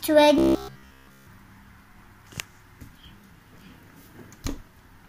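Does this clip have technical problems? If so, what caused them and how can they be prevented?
Yes. From 0.38 to 1.27 s there's robotic sound from repeated short buffers. The audio turns into a rigid buzz at 66.7 Hz, which fits a buffer of about 15 ms. That chunk was likely replayed over and over while fresh audio failed to arrive, and essentially the whole stretch is repeats. To prevent it, give the audio path more buffering headroom and make sure nothing stalls the thread that delivers the audio.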